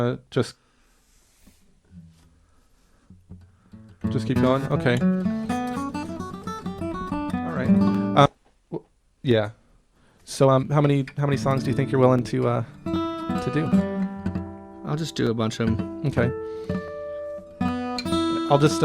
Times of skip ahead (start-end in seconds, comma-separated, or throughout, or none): 8.25